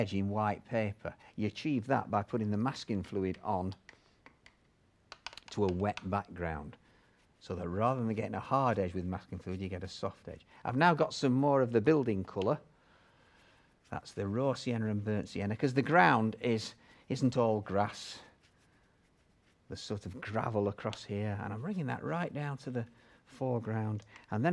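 No technical faults are audible.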